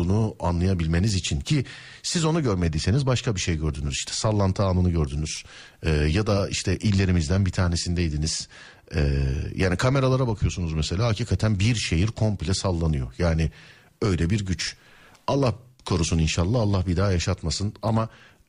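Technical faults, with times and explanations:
No technical faults are audible in this speech recording.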